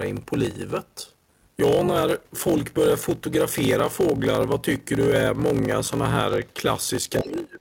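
A block size mismatch (padded) runs from start to finish: each block is written short and topped up with silence before a larger read, consistent with a 1024-sample block, so a 46.9 Hz buzz rides under the speech, which plays at 0.861 times normal speed.

From 7.19 s to the end at 7.60 s, the speech falls away sharply, by roughly 25 dB at its lowest. This is likely speech suppressed in double talk, where an echo canceller mistakes overlapping far-end sound for echo and turns the talker down.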